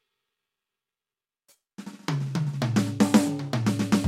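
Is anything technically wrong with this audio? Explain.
No, nothing in this music clip points to a technical problem; the signal holds steady and intact throughout.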